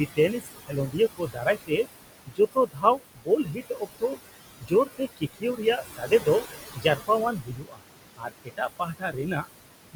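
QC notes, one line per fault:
Throughout, noise suppressor artifacts: the suppressor pulls bands it judges to be steady noise down by about 19 dB frame by frame, so the room noise (about 11 dB below speech) sinks between phrases and swells under them.
0.16–1.86 s, 2.26–4.18 s, 4.6–6.27 s, 6.74–7.84 s, 8.17–9.48 s, speech cut by the noise suppressor: quiet speech is mistaken for noise and dropped by about 19 to 21 dB, so soft consonants and endings sound swallowed. This affects under a second per span, about a second in the second.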